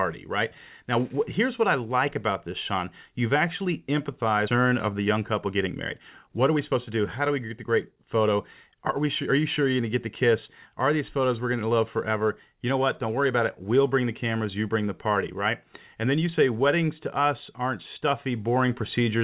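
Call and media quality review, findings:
Skip ahead at 4.48–4.50 s: speech jumps forward with no gap, roughly 0.7 s gone. Queued audio was dropped in transit or by the jitter buffer, splicing the two sides almost directly.

Jitter buffer speed-up at 4.58–5.68 s (108%) and 6.27–6.91 s (107%): speech sounds a bit hurried, same pitch. The buffer trimmed pitch periods, around a tenth of a second, then around half that, to shed excess delay. Band tops out at 4 kHz, fitting G.711 mu-law.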